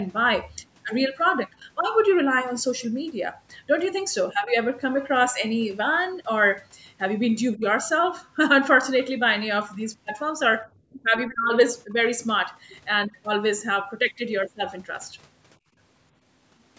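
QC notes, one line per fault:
7.55 to 11.97 s, speech suppressed in double talk: the talker's level dips four times, at 7.55 to 7.64 s, 10.92 to 11.05 s, 11.26 to 11.53 s and 11.86 to 11.97 s, by about 15, 20, 25 and 5 dB. Each dip lasts roughly a tenth of a second, the third about a third of a second. This is likely the echo canceller, unable to separate near talker from loudspeaker echo, pulling both down.
12.69 to 12.76 s, other side's voice leaking through: a brief scrap of a second voice surfaces, sitting around 30 dB below the talker. It points to loudspeaker playback that the echo canceller likely failed to remove completely from the microphone signal, leaving a faint residue.
15.59 to 15.77 s, background gated by the echo canceller: the room sound drops by about 18 dB for roughly a fifth of a second, then recovers. The canceller clamped the microphone hard while the loudspeaker played, taking the ambience down with it until release.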